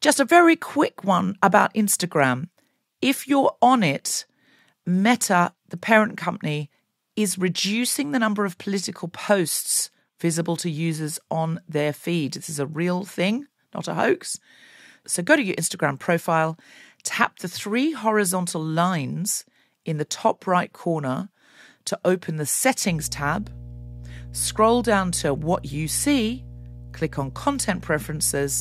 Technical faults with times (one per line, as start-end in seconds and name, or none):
22.89-28.60 mains hum